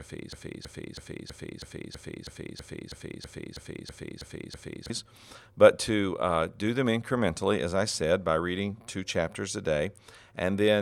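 A broken-record loop runs from 0.0 s to 4.9 s, already under way when the clip begins. A fragment of speech about 0.32 s long repeats exactly, back to back, 14 times, giving a stuttering, mechanical cycle with no forward progress. The likely cause is a player, encoder or stream that stalled and kept resending the last piece it held, so the speech that belonged in those seconds is missing.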